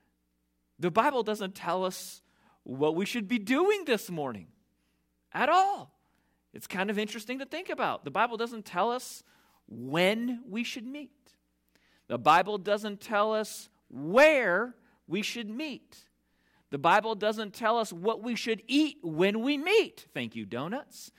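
Nothing in this speech recording points to a technical fault. The audio runs from its first moment to its last without any audible disturbance.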